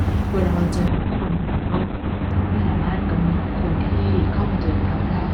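At 0.89 s a call bitrate drop sets in and lasts to the end. The encoder falls from 32 kbps to 6 kbps, bottoming out for 1.3 s, and the speech turns muffled and watery. A spectrogram shows everything above 4 kHz abruptly cut away.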